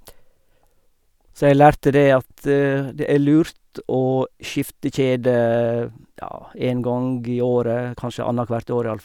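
No technical faults can be heard in the speech. There is nothing to place in time order, since no moment stands out as a point where something goes wrong.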